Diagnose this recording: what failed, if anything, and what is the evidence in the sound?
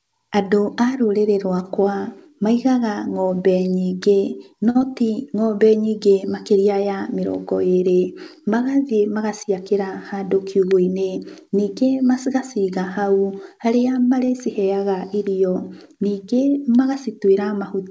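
The network and jitter-buffer stage of the call path caused these faults. At 4.70 to 4.77 s and again at 14.26 to 14.30 s there is a short stall from a late packet. The speech holds on one sound, stretched by about 50 ms and then 20 ms, with a slight buzz or dip before it carries on where it stopped. Nothing is dropped; the buffer simply ran dry and waited. That separates it from loss, where audio actually goes missing.

Right after the first stall, at 4.79 to 4.83 s, comes a short concealed packet loss. About 40 ms of audio never arrived, and roughly 17 ms of synthesized continuation bridges the gap. It sounds like a quick smear or wobble rather than a held sound. The receiver also shortened its delay by roughly 20 ms here, so unlike a stall, the timeline jumps forward.

From 9.61 to 10.38 s a jitter buffer speed-up plays the speech at about 106% of normal rate with unchanged pitch. The buffer had built up excess delay, and the receiver trimmed around 50 ms by cutting short pitch-period slices. 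It sounds mildly hurried, the mark of deliberate time compression rather than loss. All of this sits on top of the G.722 path, whose band stops at 8 kHz.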